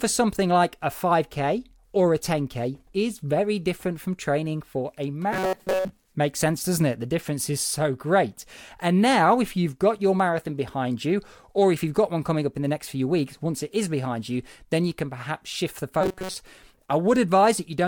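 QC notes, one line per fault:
5.33–5.90 s, robotic sound from repeated short buffers, after "from training for a". The speech becomes a rigid metallic buzz at 188 Hz. A roughly 5 ms chunk likely repeats while most of the real audio is skipped.
16.01–16.34 s, the same robotic buzz at 188 Hz, after "can perhaps shift the".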